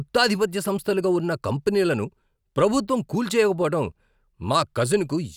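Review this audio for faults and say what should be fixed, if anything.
No faults heard in this speech; nothing needs fixing.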